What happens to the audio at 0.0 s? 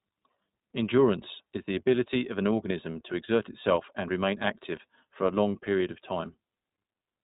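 From 0.0 s the speech is already passing through the iLBC codec, and this runs through the whole clip. Each short frame, which fits 20 ms frames at 15.2 kbps, is coded independently. Nothing above 3.8 kHz survives. The speech sounds plainly rough and synthetic.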